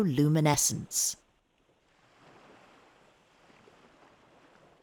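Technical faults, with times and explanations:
0.54 s and 3.6 s, dropped buffer (overrun): the program likely failed to read samples before the hardware overwrote them. The two sides join directly with no gap, so the audio skips ahead, losing about 20 ms, then about 40 ms.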